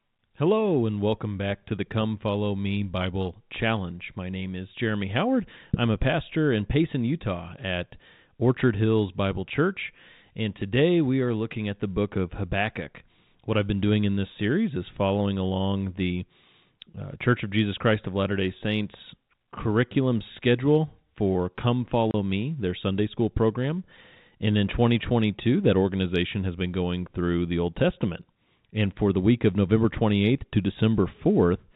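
Packet loss filled with silence occurs at 22.11 s. A single packet of about 30 ms never arrived, and the receiver played silence in its place, so the speech drops out abruptly, leaving a hard-edged hole over the band-limited G.711 telephone sound.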